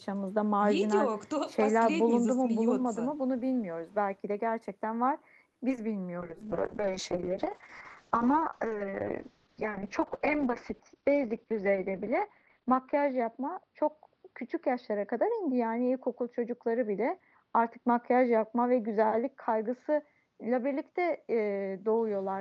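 From 5.49 to 5.93 s, repeated packet loss (robotic sound) sets in. Four gaps follow closely, each patched by stretching the preceding sound, so about a third of the span is concealed. Unlike a single dropout, the repeated patching gives a choppy, robotic stutter.

At 6.22 s a call bitrate drop begins and lasts to the end, with the encoder falling from 32 kbps to 6 kbps and bandwidth shrinking from 20 kHz to 6 kHz. A simple low-pass filter would only muffle the sound. Here the coarse coding also makes it rough and watery.

Between 10.70 and 11.47 s a jitter buffer speed-up trims about 50 ms of pitch-period slices to cut excess delay. The audio plays at 106% speed and sounds hurried, while pitch stays unchanged, which separates this from a resampling or pitch-shift error.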